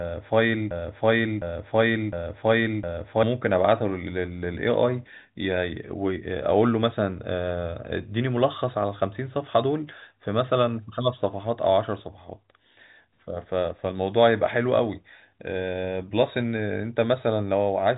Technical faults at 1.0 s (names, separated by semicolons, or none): broken-record loop